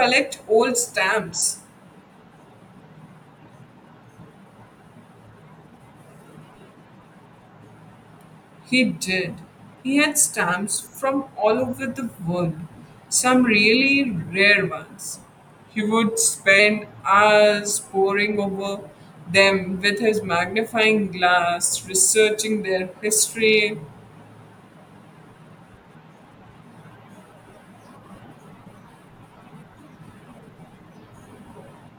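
From 15.14 to 16.59 s the speech abruptly slows by 5.8% and drops about a semitone (104 cents), then snaps back. This is likely a drift correction step in clock-matching software. Unlike wow's gradual wavering, speed and pitch shift together in one sudden step.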